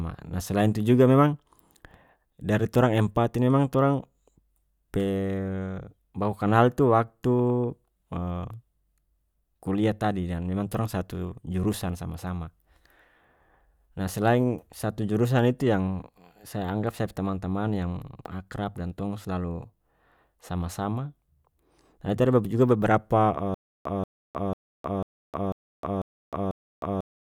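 At 23.54 s the speech breaks into a stutter with silent gaps that lasts to the end of the clip: a 184 ms fragment repeats seven times, each followed by about 310 ms of digital silence, so the burst returns every 495 ms. The likely cause is a stalled player or stream replaying its last buffered fragment on each retry, and the speech that should have followed is lost. A waveform shows identical blocks separated by flat silent stretches; a spectrogram shows matching vertical slices with empty gaps.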